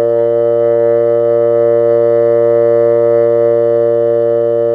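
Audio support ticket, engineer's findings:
No faults found in music.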